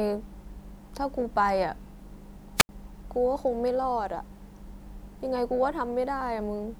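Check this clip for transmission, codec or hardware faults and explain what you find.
One fault stands out in the speech: a wireless microphone squelch dropout from 2.56 to 2.69 s. The analogue FM radio signal fades. Hiss briefly rises. The receiver's squelch then mutes the output, leaving an 80 ms hole of near silence before the speech returns.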